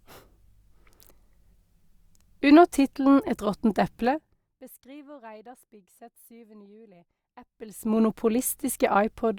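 Level changes are applied in unsmoothed 2 dB jumps instead of a continuous ramp, causing zipper noise. From 4.03 to 4.59 s the speech falls about 25 dB, and from 7.40 to 7.99 s it rises back, each with a ticking of around 30 steps per second.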